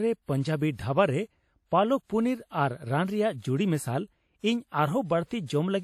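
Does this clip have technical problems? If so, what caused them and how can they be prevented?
Yes. WMA compression damage runs through the whole speech clip. It sounds ringing and washy, with hiss that breathes with the signal. Nothing is heard above 16.2 kHz. The likely cause is a long-block transform codec, and the damage fits a bitrate near 48 kbps. Encode at a higher bitrate to prevent it.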